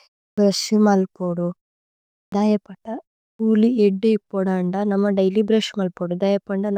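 Speech with a clipped start after a pause, three times: at 0.32 s before "ബ്രശ് മല് പോദു", at 2.27 s before "ദൈപത കുലി ഇദ്ദി പോദന്ദ", and at 3.34 s before "കുലി ഇദ്ദി പോദന്ദ നമ", each losing about 53 to 56 ms of onset. The output device falls asleep during pauses of 0.32 to 0.74 s and needs time to wake, so each phrase bursts in without its first sound. Muted pauses would only silence the gaps and leave the onsets intact.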